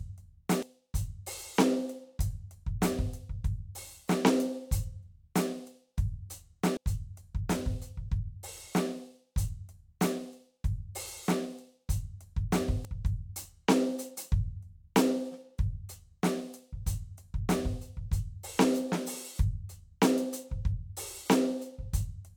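At 0.62 s and again at 6.77 s the music breaks into a brief blip, and at 12.85 to 12.88 s a longer glitch follows. All three are damaged data in a compressed stream: corrupted bytes make the decoder misread frames, lose sync and hunt for the next header. On a spectrogram each appears as a thin vertical smear of broadband energy, and the waveform shows a short discontinuity, widest at 12.85 s.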